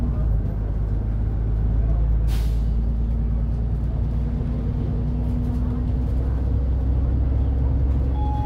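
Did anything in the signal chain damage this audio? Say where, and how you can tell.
No, nothing along the chain has audibly damaged this audio, and no stage leaves a mark on the sound anywhere in the clip.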